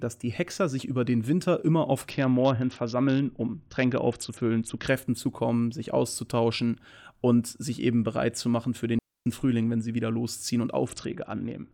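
From 2.10 to 4.88 s the speech shows a Bluetooth SBC bit pool drop. The encoder has cut its bit allocation sharply, so the highest sub-bands get little or nothing and the remaining bands are quantised coarsely. The result is dull, band-limited treble with a gritty, granular noise riding on the speech. The degree of dulling points to a bit pool falling from around 28 to about 7, roughly a 66 kbps stream.

At 8.99 s a digital wireless dropout mutes the signal for 0.27 s, ending at 9.26 s. The receiver has lost too much data to decode and fades to near silence almost instantly, leaving a clean gap with no burst of noise at either edge. It then resumes just as abruptly once valid data arrives.

From 10.86 s to the end of the clip the same SBC bit pool drop returns. The treble dulls and the gritty quantisation noise comes back, again consistent with a bit pool near 7, and the rate does not recover before the audio ends.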